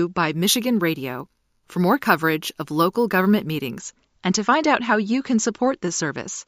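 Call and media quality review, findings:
Imaging from sample-and-hold upsampling, 0.33–3.78 s. Resampler repeats samples with no smoothing filter, which fits a 16 kHz stream raised to 48 kHz. Mirrored speech spectrum at 8–16 kHz, about -17 dB, heard as metallic fizz tracking level, moving against pitch.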